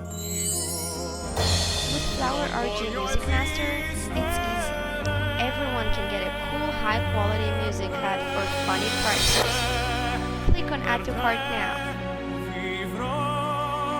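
No technical faults are audible.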